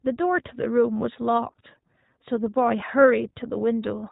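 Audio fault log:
throughout, iLBC codec: speech sounds narrow and plainly rough and synthetic, with nothing above 4 kHz, because each 20 ms frame's excitation is coded independently in narrowband.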